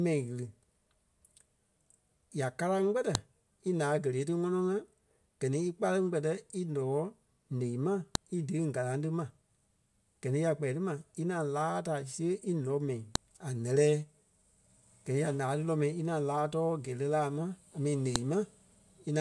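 Sharp, loud clicks at 3.15, 8.15, 13.15 and 18.16 s, exactly 5 s apart, point to a file header played as audio: WAV header bytes left in each joined 5 s piece, as just before "í deɣiiŋ galaŋ ti", snap regardless of the speech underneath.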